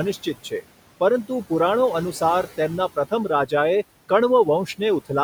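From the start and through the whole clip, the background sinks away in the gaps and swells back up under the speech. These are noise suppressor artifacts: the suppressor treats the steady room noise, which sits about 15 dB below the speech, as something to remove and pulls those frequency bands down by about 18 dB frame by frame, so the residue keeps shifting instead of staying even.

Between 0.13 and 0.64 s, parts of the speech go faint and sound swallowed, with quiet sounds losing their edges and dropping by as much as about 15 dB. Altogether only a short stretch, roughly a sixth of a second, is affected. This is speech cut by the noise suppressor: it mistook these softer speech components for background noise and turned them down along with the room sound.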